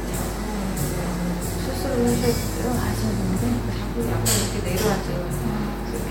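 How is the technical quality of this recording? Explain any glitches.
The recording is marred by mains hum that runs the full length of the clip. A steady low tone sits at 50 Hz, with a few low harmonics above it, and it is loud, only around ten decibels below the wanted sound. A ground loop or a nearby transformer is letting the power line leak into the signal path. Its unwavering pitch, locked exactly to the mains frequency and never drifting or pulsing, distinguishes it from low rumble or handling noise.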